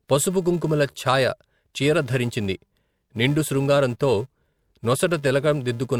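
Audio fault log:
throughout, filter restarted on every block: a 375 Hz buzz that follows the speech level, as the filter restarts from silence each block, which fits 128-sample blocks.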